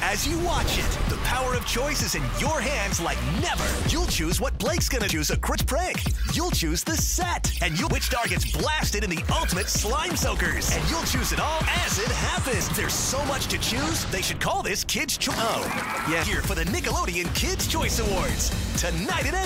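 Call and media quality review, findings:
Compressed frames skipped at 3.60, 5.09, 5.55, 7.87, 12.61, 15.30 and 16.23 s. The audio jumps forward by roughly 0.2 to 0.7 s each time. That points to whole 92.9 ms frames, a handful per event, being missing or rejected by the decoder as damaged. Unlike a dropout, there is no silent gap.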